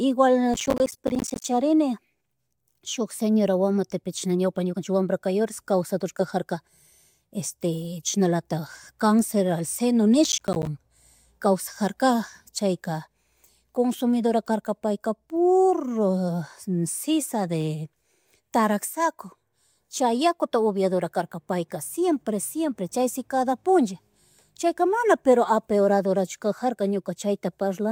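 Speech with two bursts of processor overload crackle, from 0.54 to 1.44 s and again from 10.24 to 10.67 s. Dozens of short buffers, which fits a buffer of around 10 ms, miss their deadlines in quick succession, each leaving a hard-edged silent gap. Clipping distortion would track loudness, but this gritty tearing follows processor load, starting and stopping abruptly.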